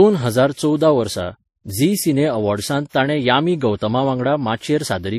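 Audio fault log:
Throughout: transcoding between lossy codecs. The speech was likely encoded as MP3 and then re-encoded as WMA, with the later codec consuming bits on the earlier one's artefacts. The result is layered artefacts from both codecs heard together, consistent with low bitrates, and nothing above 14.8 kHz.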